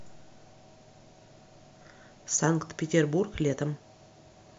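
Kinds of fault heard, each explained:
No technical fault is audible anywhere in this speech recording.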